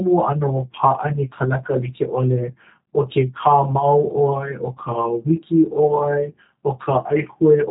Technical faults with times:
0.00-7.71 G.729 codec

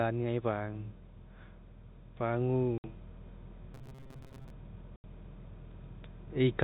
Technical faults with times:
2.18-3.01 automatic gain rising
2.78-2.84 packet loss filled with silence
3.74-4.50 robotic sound from repeated short buffers
4.96-5.04 packet loss filled with silence

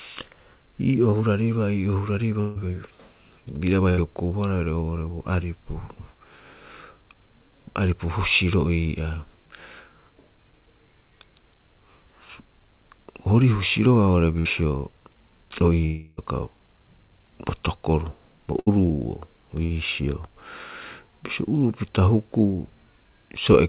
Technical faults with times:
1.10-1.14 short concealed packet loss
2.40-2.57 long network dropout
3.89-3.99 burst of packet loss
14.39-14.47 burst of packet loss
15.85-16.19 long network dropout
18.59-18.68 burst of packet loss
19.64-19.72 burst of packet loss

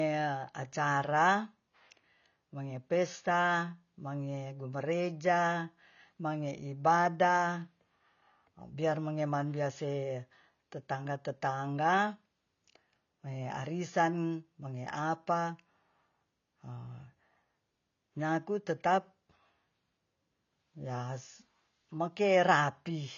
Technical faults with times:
0.00-23.17 AAC compression

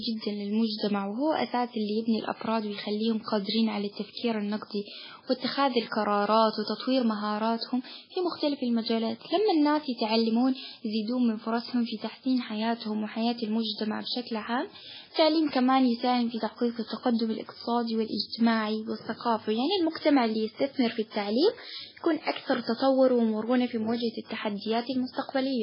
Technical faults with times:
0.00-25.63 MP3 compression

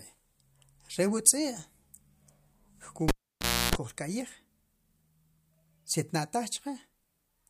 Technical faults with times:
3.08-3.75 cable pulled and plugged in

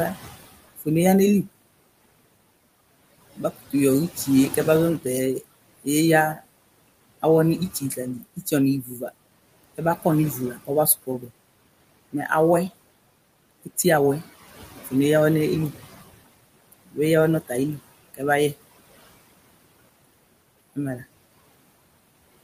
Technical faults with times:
0.00-22.43 noise suppressor artifacts
0.14-1.48 speech cut by the noise suppressor
3.37-12.71 speech cut by the noise suppressor
16.72-18.55 speech cut by the noise suppressor

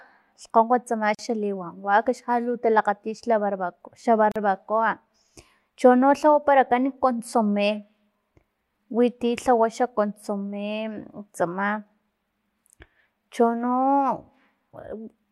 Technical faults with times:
1.15-1.19 gap at a join of encoded pieces
4.32-4.36 gap at a join of encoded pieces

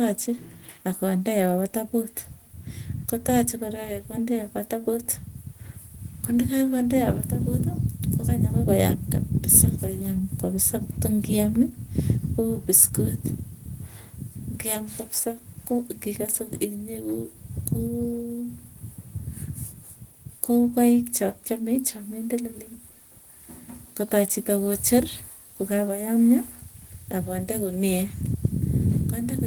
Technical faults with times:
none

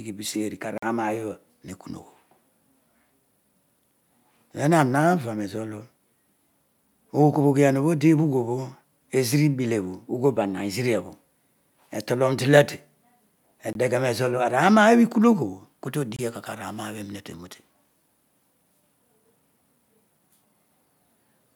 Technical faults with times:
0.78-0.83 Bluetooth dropout
13.73-13.75 Bluetooth dropout
16.16-16.19 Bluetooth dropout

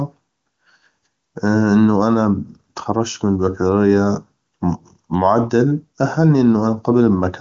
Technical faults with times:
none

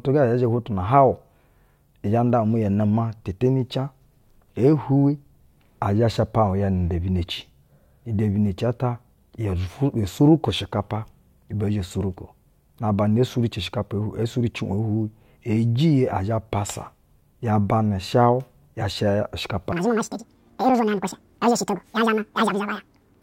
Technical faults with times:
19.72-23.23 audio read two samples at a time (double speed)

